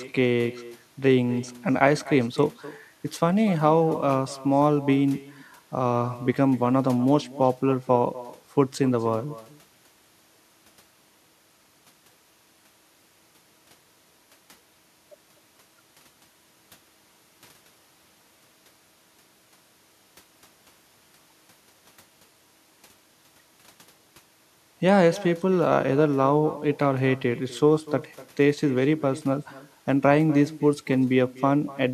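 From start to finish the speech carries an echo with no canceller. At the far end the call is played over a loudspeaker, the microphone there picks it up again, and nothing subtracts it, so every phrase returns roughly a third of a second later, about 18 dB quieter and thinner. Unlike room reverberation, which smears into a continuous tail, this is a distinct, separated repeat trailing each phrase.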